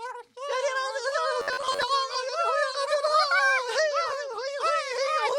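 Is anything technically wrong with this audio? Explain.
Yes. From 1.40 to 1.86 s there is robotic sound from repeated short buffers. The audio loses its natural texture and becomes a rigid, metallic buzz pitched at about 93.8 Hz. The likely cause is audio arriving too seldom, so the playback fills the gaps by looping the most recent fragment. A 93.8 Hz repeat points to fragments of roughly 10.7 ms. About half of the material in that stretch is repeated rather than new.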